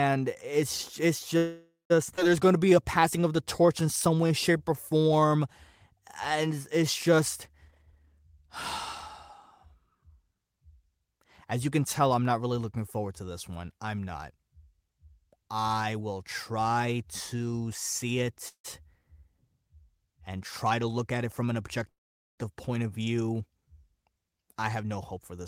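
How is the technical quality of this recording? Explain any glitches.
The recording has clear network-delivery problems: three call audio freezes, one skip ahead, one stretch of jitter buffer slow-down and two of jitter buffer speed-up.

Call audio freeze: at 1.37 to 1.92 s, right after "it's it's", the sound stalls for about 0.53 s. The last fragment is stretched into a fading buzz or hiss, then about 170 ms of silence follows before the sound resumes where it left off. Similar stalls occur at 18.48 to 18.66 s after "will try to see" (about 0.16 s, 100 ms of it silent) and at 21.90 to 22.40 s (about 0.48 s, almost all silent). The likely cause is packets held up in transit so the jitter buffer emptied. Nothing is lost, but a pause is inserted. On a spectrogram, a smeared, fading copy of the preceding spectrum runs into a blank band. The waveform shows a decaying tail and then a flat line.

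Skip ahead: at 2.16 to 2.20 s the sound jumps forward. Roughly 0.3 s of audio is gone, and the two sides are joined by only about 15 ms of filler. On the waveform this appears as an abrupt splice with a discontinuity. The spectrogram shows a sudden change in formant pattern with no transition.

Jitter buffer slow-down: from 2.44 to 5.28 s the receiver repeated single pitch periods and fragments of pauses to rebuild its reserve. About 0.3 s is added, and playback runs at 90 % speed with the pitch unchanged. Sounds are drawn out. In a spectrogram, harmonics stay at the same height while the formants are stretched sideways. Repeated cycles can be seen in the waveform.

Jitter buffer speed-up: from 7.65 to 10.36 s, after "and it's just", the receiver trimmed pitch periods to shed excess delay. Roughly half a second is removed and the sound runs at 120 %, noticeably hurried at normal pitch. A milder pass from 20.63 to 25.39 s runs at 104 %, dropping about 0.2 s. 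The spectrogram shows compressed formant movements with unchanged harmonic spacing.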